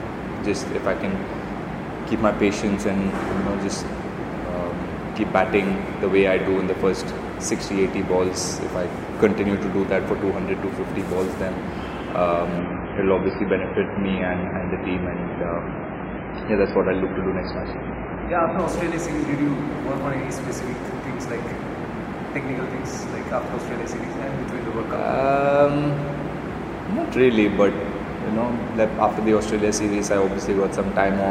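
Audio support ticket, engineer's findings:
Adaptive stream at a lower bitrate, 12.59 to 18.59 s. Treble cuts out suddenly, with nothing above 5 kHz, and codec artefacts thicken, with no gap. Spectrogram: a flat ceiling at 5 kHz for six seconds. This fits a fall from 128 to roughly 15 kbit/s MP3.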